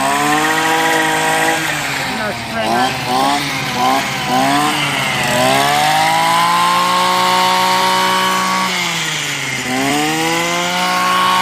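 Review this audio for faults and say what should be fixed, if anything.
Compressed frames skipped at 9.87 to 9.91 s: roughly 20 ms of encoded audio never decodes, so the sound jumps ahead at the join. To prevent it, re-encode from an intact source and verify the file's frame integrity before delivery.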